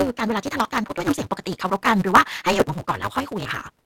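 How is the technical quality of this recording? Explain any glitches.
The technical quality is poor, with two distinct faults.

Throughout, a block size mismatch (truncated) discards each block's tail, which fits 256-sample reads. The result is a 188 Hz buzz and speech running 1.88 times fast at near-normal pitch.

At 0.88 s and again from 3.43 to 3.46 s, short concealed packet loss appears. The decoder filled the 20 ms and 40 ms gaps by extending the preceding sound, leaving a brief smear or wobble.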